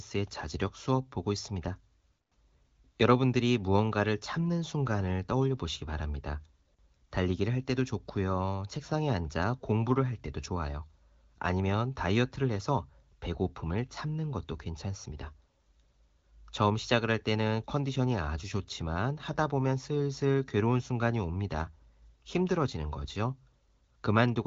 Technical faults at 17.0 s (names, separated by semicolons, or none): none